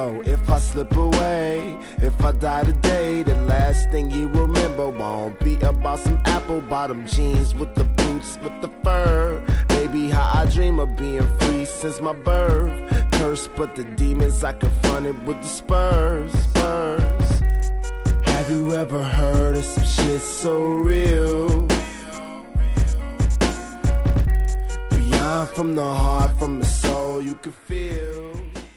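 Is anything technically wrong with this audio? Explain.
Yes. Throughout, the resampler restarted on every block: each 50 ms block was converted separately, which fits a 24 kHz to 48 kHz upsampling, so edges lacked true neighbouring samples. The resulting small edge errors produce a regular 20 Hz ticking whenever sound is present.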